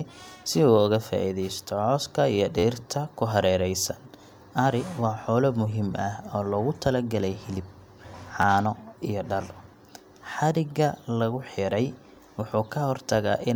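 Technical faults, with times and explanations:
2.59–2.64 s and 8.42–8.44 s, repeated buffer: new audio arrived late, so the same piece of about 12 ms (fitting a 512-sample buffer) replays with a hard join at each repeat. Several rapid repeats before "ku hareeraysan", and fewer at 8.42 s, make brief buzzy stutters while nothing is skipped.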